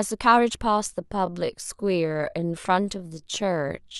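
From 1.0 s to the end of the clip the speech suddenly drags to about two-thirds of its earlier pace while its pitch stays put. This is likely a time-stretched section: software lengthened the audio by a factor of about 1.5 and held the pitch steady by repeating short slices.

Between 1.59 and 1.62 s, inside that slowed passage, a brief glitch cuts across the sound, peaking around -25 dBFS. It is a corrupt frame decoded: damaged bits in a couple of compressed frames were played rather than concealed, so misread gains and codes put energy at the wrong frequencies for roughly the span of those frames.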